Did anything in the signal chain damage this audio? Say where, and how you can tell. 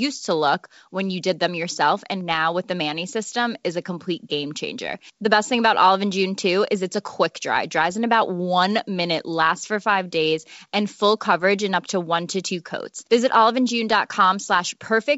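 No, nothing in this speech clip stood out on listening as damage from any stage of the chain, and the wideband G.722 coding at 64 kbit/s that it passed through leaves at most a faint mark of its own.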